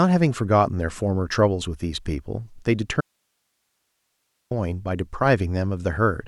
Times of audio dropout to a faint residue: 3.01-4.51

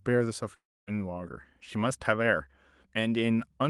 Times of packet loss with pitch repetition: none

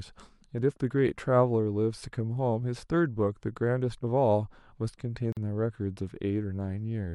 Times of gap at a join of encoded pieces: 5.32-5.37

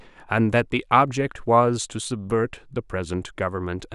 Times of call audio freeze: none

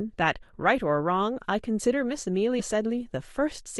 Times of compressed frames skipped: 0.42, 2.59-2.61

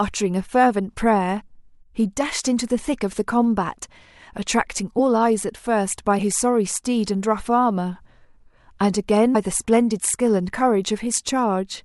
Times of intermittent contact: none

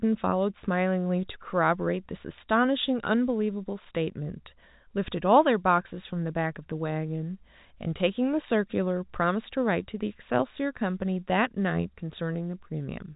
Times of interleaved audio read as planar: none

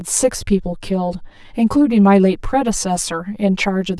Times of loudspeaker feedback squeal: none

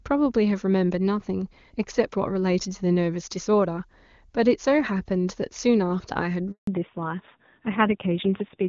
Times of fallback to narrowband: 6.67-8.69

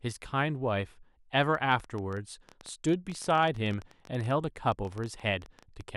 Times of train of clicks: 1.55-5.82

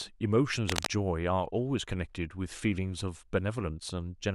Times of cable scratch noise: 0.66-0.87

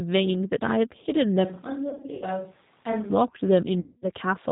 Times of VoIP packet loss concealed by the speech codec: 1.90-2.25, 3.80-4.08

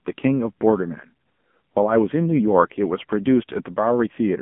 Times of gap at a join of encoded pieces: none

